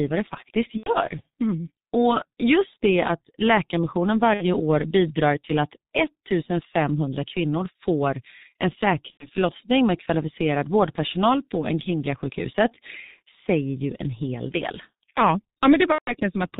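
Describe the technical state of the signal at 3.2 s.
At 3.2 s you're hearing the G.723.1 codec, and it's there for the whole clip, not just that moment. The coder works in 30 ms frames with a slowly updated voice model and throws away everything above 4 kHz, so the speech comes out muffled and hoarse, with consonants smeared together. The damage is heavy, and the muffled, hoarse quality fits a very low rate of around 6 kbit/s.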